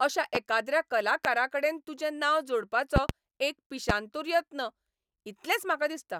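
Loud pops at 0.35–0.38, 1.25–1.28, 2.96–3.13 (two in quick succession) and 3.90–3.93 s: sharp, far-above-speech thumps, likely electrical pulses, with speech continuing underneath rather than dropping out.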